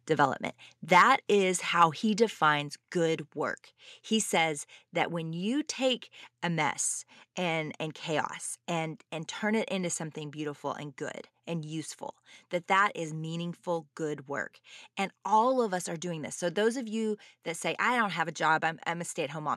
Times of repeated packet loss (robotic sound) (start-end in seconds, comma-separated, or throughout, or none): none